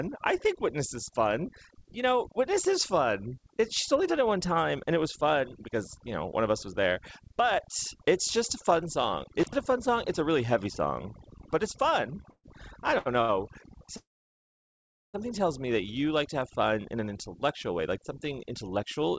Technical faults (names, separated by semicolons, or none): overdone noise removal; intermittent contact; call audio freeze; short stall from a late packet; jitter buffer speed-up